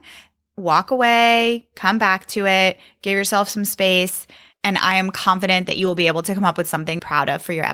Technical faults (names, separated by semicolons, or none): lost packet rebuilt from error correction; CD skip